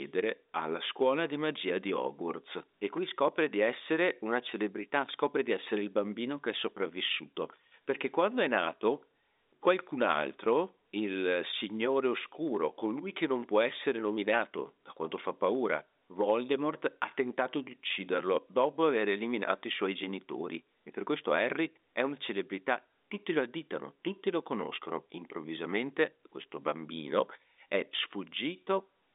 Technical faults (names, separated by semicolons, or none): none